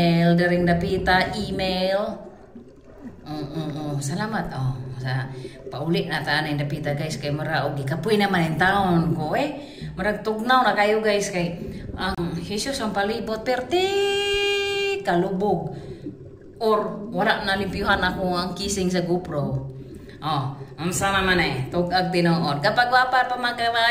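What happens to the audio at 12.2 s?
Right around 12.15 to 12.19 s there's a Bluetooth stall: the sound drops out for about 30 ms, likely from interference starving the headphones' buffer, then resumes.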